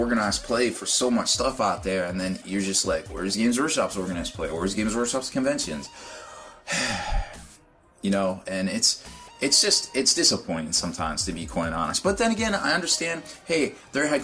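No technical faults can be heard anywhere in the recording. There is nothing here that calls for a time stamp or a measured value.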